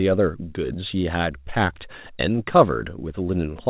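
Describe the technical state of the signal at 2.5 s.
At 2.5 s the speech carries slight hiccups and a faintly unsteady tempo. These are repeated timing corrections, running from 0.29 to 3.58 s: the receiver keeps trimming short slivers of audio, all in the same direction and unevenly spaced, so playback runs at about 104 percent speed.

The cause is clock drift between sender and receiver. The sender's clock runs about 5 percent fast, so the jitter buffer keeps overfilling and must discard small pieces to stay in step.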